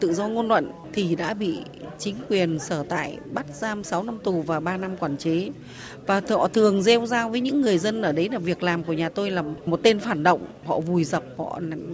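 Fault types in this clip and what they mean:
No faults of any kind can be heard anywhere in the clip.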